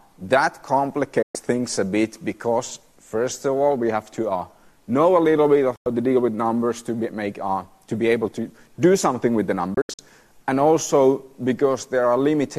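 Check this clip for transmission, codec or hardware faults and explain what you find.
There are three digital broadcast dropouts. At 1.22 to 1.35 s and 5.76 to 5.86 s the sound snaps to silence over about 3 ms and returns about 120 ms and 96 ms later. At 9.74 to 9.99 s it breaks into several short holes spread over 240 ms, the longest 72 ms. The receiver muted while frames failed their checks, and whatever was sent in those gaps is simply gone. The gap lengths point to runs of 24 ms frames.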